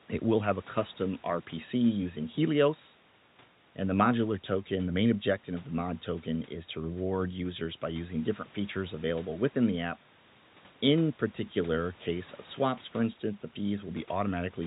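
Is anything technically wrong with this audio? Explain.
No, nothing's wrong here: the speech sits comfortably above a faint room noise about 29 dB down, and the sound tops out at 4 kHz, just as you'd expect from a call carried over a narrowband G.711-type phone codec.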